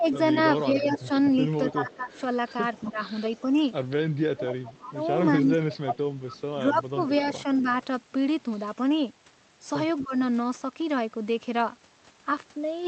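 Speech suppressed in double talk runs from 0.00 to 7.67 s. The voice repeatedly dips by as much as about 15 dB, adding up to roughly three seconds of lost level, with parts thinned or chopped. This is likely an echo canceller that, while both sides spoke, could not tell the near talker from loudspeaker echo and turned everything down.

An echo leak overlaps this from 0.05 to 3.41 s. A faint copy of the voice trails the original by 247 ms, about 20 dB below it. The likely cause is a loudspeaker at the far end whose echo canceller let part of the pickup back into the call.

A second echo leak, a short scrap of the same 247 ms delayed copy at about 20 dB down, appears from 6.27 to 6.41 s. It is likely the same canceller failing to remove all of its own loudspeaker output.

A brief speech suppression in double talk follows at 10.01 to 10.14 s. The level drops by up to about 15 dB for roughly 150 ms, likely the canceller again ducking the voice as both sides overlapped. 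Throughout the clip the high end stops near 8 kHz, as the Opus call path limits the bandwidth.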